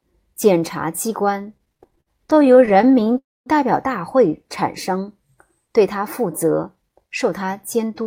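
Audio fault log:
1.57–3.16 s, repeated stalls (stutter): the sound keeps catching and dragging as 32 short gaps, the longest 58 ms, are bridged by continuing the last sound, 356 ms added in all, about a fifth of that span. On a spectrogram, repeated smeared, flat-topped stretches break the natural movement.
3.18–3.48 s, call audio freeze: the sound hangs as a fading buzz, 280 ms in all with roughly 230 ms of it gone quiet, before resuming where it stopped, likely from packets held up in transit. The waveform shows a decaying tail into near-flat silence, with nothing lost.
6.24–8.01 s, jitter buffer speed-up: the speech runs about 7% fast at unchanged pitch and sounds hurried, as the receiver trims one or a few pitch periods repeatedly, removing roughly 150 ms to cut the backlog. The spectrogram shows compressed timing and tiny seams at the splice points.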